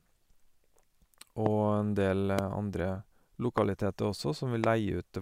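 Four loud pops cut through the speech, at 1.46 to 1.48 s, 2.39 to 2.41 s, 3.58 to 3.60 s and 4.64 to 4.66 s. Each is a single sharp hit lasting about 20 ms, jumping something like 20 dB above the speech, which keeps going underneath. The cause is likely a sudden voltage spike getting into the chain, from a plug, switch, static discharge or driver glitch, with the circuitry after it shaping that spike into a short pop.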